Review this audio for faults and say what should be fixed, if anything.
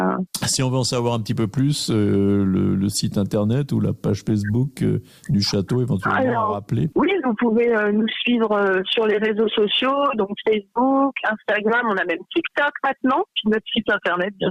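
Nothing here needs fixing, since no faults can be heard anywhere in the recording. The audio runs without dropouts, clicks, distortion or timing disturbances.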